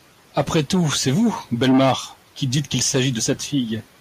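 No technical faults can be heard anywhere in this recording.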